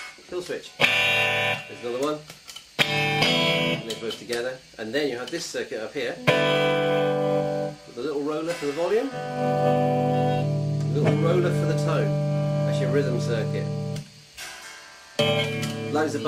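No technical faults can be heard anywhere in this audio. There is nothing at any point that calls for a time stamp or an explanation.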